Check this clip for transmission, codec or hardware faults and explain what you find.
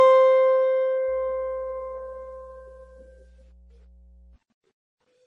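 Two faults are present in the music: a codec problem throughout and an electrical hum partway through.

Across the whole clip the sound is watery and swirly, with chirpy, metallic highs and smeared attacks, likely from heavy MP3 compression at a very low bitrate, around 32 kbps. Starved of bits, the encoder chops the treble and drops quiet frequency components frame by frame. A spectrogram shows a hard ceiling on the highs and flickering, patchy blocks below it.

From 1.08 to 4.36 s a steady low drone sits under the music. This is mains hum at 60 Hz, power-line interference leaking in through a ground loop or nearby transformer, roughly 30 dB below the music. On a spectrogram it is a thin, constant horizontal line at 60 Hz that starts and stops at those times.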